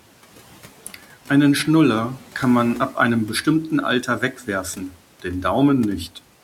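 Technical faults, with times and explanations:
4.07–4.48 s, speech cut by the noise suppressor: quiet speech was mistaken for noise and pulled down by up to about 9 dB, roughly 150 ms in total, leaving a brief notch in the waveform envelope and faded spectrogram energy.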